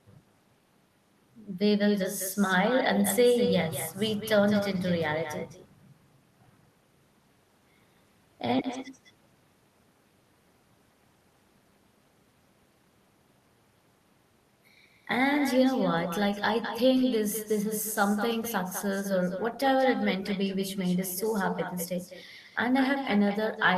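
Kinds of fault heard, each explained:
Echo with no canceller: the far end is playing this speech through a loudspeaker, and its microphone picks that sound back up with nothing there to remove it. So each phrase comes back to the talker after the round trip. Here it lands roughly a fifth of a second behind the original, at about 10 dB down. You hear every syllable trailed by a fainter, thinner double.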